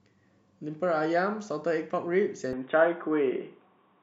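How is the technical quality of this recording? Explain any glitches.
The recording has one clear fault. Input switched to a poorer device at 2.53 s and continues to the end. The speech likely moves onto a narrower-band microphone, which cuts everything above 3.8 kHz. It turns abruptly dull and boxy, shifts level by a few decibels and gains faint new background noise, with no gap at the switch.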